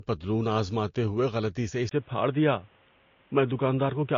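Speech with mixed artefact textures throughout and nothing above 7.2 kHz, likely from transcoding between lossy codecs. The pattern fits MP3 followed by Vorbis, unlike a single codec's uniform smearing. At 1.89 s, after "آزماتے ہوئے غلطی سے", a 20 ms gap is followed by a band capped at 3.8 kHz with new noise some 35 dB down and the level unchanged. This sudden step suggests the input switched to a poorer device, not a gradual filtering change.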